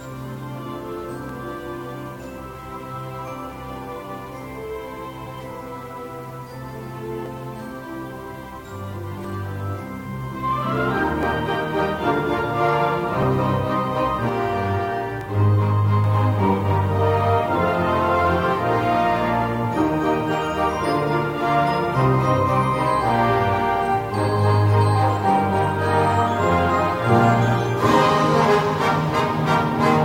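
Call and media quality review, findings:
Overlap between stream segments: brief skips at 1.29, 3.28, 7.26, 9.24, 11.23, 13.22 and 15.21 s. Roughly 2 s spacing points to the segmenter/player trimming overlapping timestamps and dropping a few ms. Unlike dropouts, there is no silence gap, just a waveform jump.

Channel delay (comb filtering): rough, slightly doubled coloration 14.29–16.04 s. Probable cause is a mono downmix with one channel lagging around 20 ms, giving fixed notches from about 30 Hz upward. Unlike codec smearing, the notches are evenly spaced and don't move.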